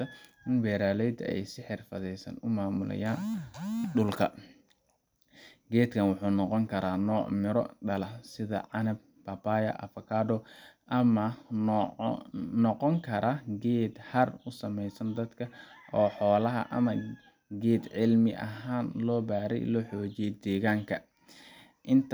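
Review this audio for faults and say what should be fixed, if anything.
Nothing in this audio needs to be fixed, as it has no faults.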